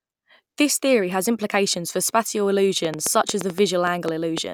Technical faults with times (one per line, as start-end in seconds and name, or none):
2.85-4.39 train of clicks